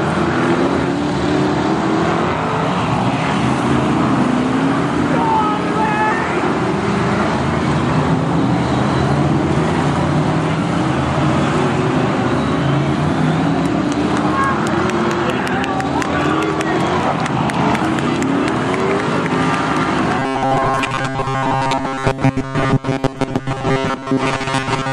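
From 20.19 s to the end at 24.93 s, the audio turns into robotic sound from repeated short buffers. The likely cause is fresh audio arriving too slowly, so playback repeats the most recent fragment, roughly 7.5 ms long, to fill the gaps, replacing most of the real material in that stretch. Those repeats impose a fixed buzz at 134 Hz, giving a rigid, metallic tone that only loosely follows the underlying sound.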